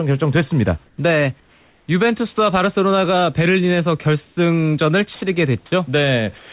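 At 0.86–0.98 s, 1.4–1.88 s and 4.25–4.37 s, comfort noise replaces the background: the room hiss turns flat and featureless, about 4 dB quieter (about 2 dB at 4.25 s). This is likely discontinuous transmission. On a spectrogram, smooth uniform patches stop at 4 kHz.

At 5.15–5.21 s, 5.66–5.72 s and from 6.38 s to the end, sound is dropped by the voice detector, which likely mistook part of the sound for background. The waveform's speech envelope collapses abruptly into a steady noise band.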